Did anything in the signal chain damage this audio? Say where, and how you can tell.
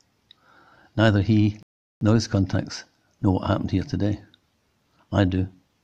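Yes. At 1.63 s the audio drops to silence and picks up at 2.01 s exactly where it left off, with nothing missing, only about 384 ms of time added. That is a rebuffering stall at the playback stage: the player exhausted its downloaded audio and paused until more data arrived.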